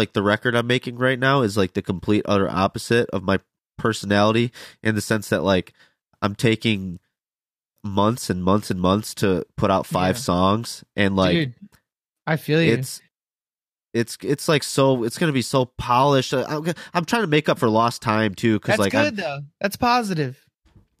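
No technical faults can be heard anywhere in the speech recording. There is nothing here to report.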